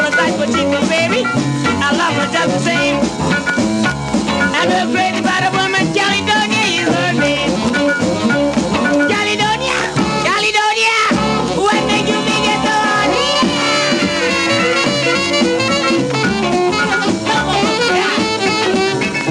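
Gain pumping runs through the whole clip: the level ducks by around 5 dB under each loud sound, leaving a squashed, breathing level. The likely cause is input gain set far too high, with a fast limiter or compressor pulling it back on peaks.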